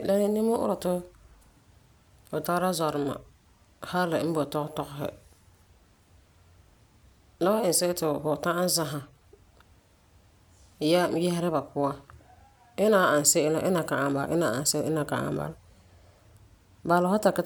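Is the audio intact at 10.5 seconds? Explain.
Yes, at 10.5 seconds the audio is intact, with no audible fault at that moment.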